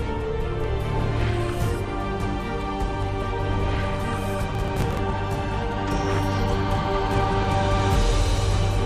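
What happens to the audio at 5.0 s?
At 5.0 s you're in a burst of processor overload crackle, 4.50 to 5.12 s: around twenty short buffers, likely about 5 ms each, get skipped, tearing the sound into grit.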